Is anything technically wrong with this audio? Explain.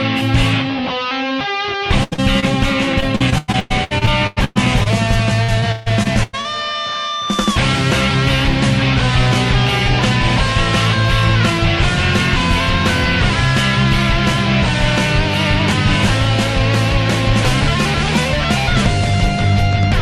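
Yes, the stream suffers packet loss in three forms.

At 2.03 to 2.14 s there is a burst of packet loss: about 80 ms of audio failed to arrive in time, so the receiver extended the last sound while fading it. This gives a held, dimming buzz or hiss before playback resumes with that stretch missing.

Right after, from 2.14 to 2.20 s, and again at 2.40 to 2.44 s, there is short concealed packet loss of about 40 ms and 20 ms. The decoder bridged each small hole with synthesized continuation and blended back, leaving a brief smear or wobble.

From 3.00 to 4.88 s and 5.44 to 6.46 s, repeated packet loss produces robotic sound. Twelve and then six gaps, the longest 110 ms and 142 ms, each got patched before the next arrived. About a third of each span is filler, so the sound turns choppy, with pieces missing.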